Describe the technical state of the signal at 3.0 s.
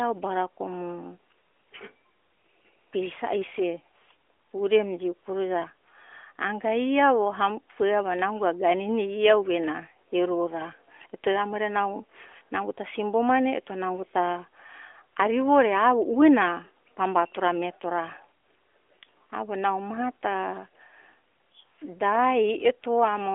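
At 3.0 s the signal is intact, with the narrowband band-limiting of the AMR narrowband mobile codec audible as a telephone-like sound but no fault present.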